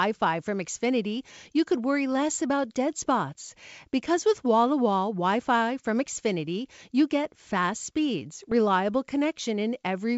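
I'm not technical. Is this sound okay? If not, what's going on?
No. Bit errors on an ADPCM link cause pops and rough bursts at 2.23 s, between "you could worry" and "about dead spots", at 6.39 s, just before "you get fast speeds", and from 8.40 to 8.53 s, just after "you get fast speeds." A few digital bits get flipped in transmission, which briefly knocks the decoder off track, so each glitch rings on for a moment.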